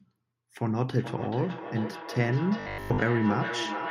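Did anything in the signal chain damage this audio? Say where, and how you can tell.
Yes. A feedback echo between two devices runs from 0.94 s to the end, at the call-processing stage. The sound returns about every 400 ms, peaking about 8 dB below the direct speech. A second device's loudspeaker is re-entering this microphone, which the local echo canceller cannot remove.

Robotic sound from repeated short buffers appears from 2.60 to 3.02 s, at the driver or buffer stage. The sound becomes a rigid metallic buzz at 50 Hz. The likely cause is a 20 ms block being replayed to cover late audio, with most of the real signal in that span skipped.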